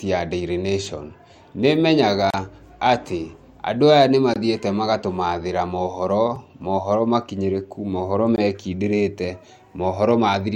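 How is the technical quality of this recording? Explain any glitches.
Four short dropouts interrupt the speech, each a gap between stream segments: at 2.30 s for 33 ms, just before "atĩ andũ aya nĩ"; at 4.34 s for 21 ms; at 6.36 s for about 4 ms, after "magatũmaathĩra moohoro"; and at 8.36 s for 19 ms. The two-second spacing fits segments whose timestamps leave slight holes that playback fills with silence. Each sounds like an abrupt, hard-edged break. On a waveform it appears as a flat, hard-edged notch, and on a spectrogram as a thin vertical blank stripe.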